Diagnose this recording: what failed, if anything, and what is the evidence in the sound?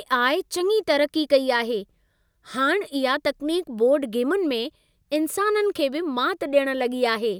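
Nothing failed; no stage shows an audible fault.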